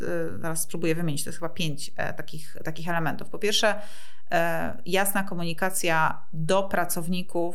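From start to finish the speech sits on a DC offset of about -25 dBFS: the whole waveform is displaced from zero by a fixed amount, eating into headroom on one side so peaks reach full scale sooner. It is inaudible as such, showing only as steady energy at 0 Hz. That sets it apart from mains hum or rumble, which oscillate at 50 Hz, 60 Hz or low, shifting frequencies and can be heard.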